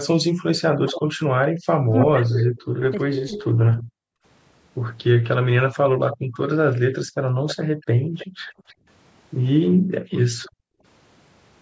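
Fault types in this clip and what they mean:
speech suppressed in double talk: From 0.81 to 3.46 s the voice dips and breaks up in pieces, for roughly a second and a half in all, with the deepest drops reaching around 40 dB. This happens while the far side is talking at the same time. The echo canceller likely could not separate its own talker from the loudspeaker echo and turned both down together.
echo leak: A fainter, delayed copy of the voice trails about 0.32 s behind it. It runs from 2.0 to 3.83 s and again from 7.47 to 8.75 s, with short scraps at 6.11 to 6.17 s and 10.43 to 10.49 s, sitting roughly 10 to 25 dB under the speech. The likely cause is a loudspeaker at one end whose echo canceller left part of its microphone pickup in place and sent it back.
background gated by the echo canceller: The room sound drops away abruptly from 3.83 to 4.24 s, for about 0.4 s. It drops again in stretches between 6.17 and 10.83 s that add up to roughly 2 s, falling by up to about 40 dB before returning. 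While the loudspeaker was playing, the echo canceller clamped the microphone down hard, and the background came back only when it let go.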